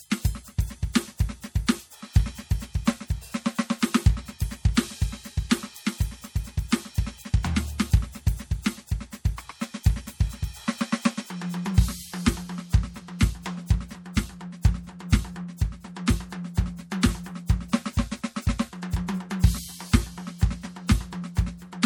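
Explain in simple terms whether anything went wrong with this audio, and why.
Across the whole piece the music sounds watery and swirly, with metallic chirps on cymbals and hiss-like sounds, and blurred hits. That is likely MP3 compression squeezed too hard, dropping quiet detail that flickers in and out.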